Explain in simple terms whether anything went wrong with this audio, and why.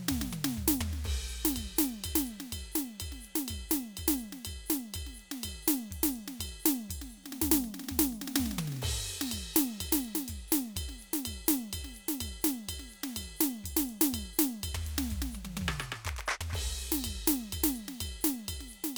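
Nothing went wrong here.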